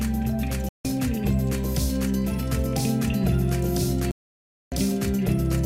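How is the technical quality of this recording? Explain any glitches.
The recording has two digital broadcast dropouts, from 0.69 to 0.85 s and from 4.11 to 4.72 s. Each time the receiver lost valid frames and muted, so the sound cuts to silence for 160 ms, then 608 ms, resuming later. The gaps fit 32 ms frames, and whatever was sent during them is lost.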